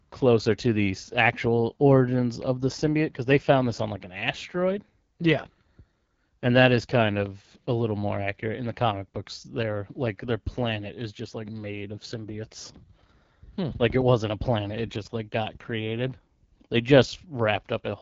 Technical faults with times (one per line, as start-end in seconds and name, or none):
0.00-18.02 AMR wideband (HD Voice) codec